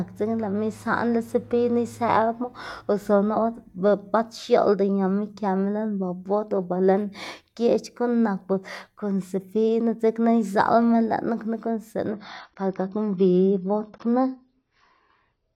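At 12.14 s the speech switches abruptly to an adaptive stream at a lower bitrate and stays there to the end. The player dropped to a cheaper encode with no gap, a change that fits a step from roughly 96 kbit/s AAC down to about 24 kbit/s. The treble vanishes and codec artefacts rise. On a spectrogram, energy above 6.6 kHz stops at a sharp horizontal ceiling from that moment, while the waveform runs on unbroken.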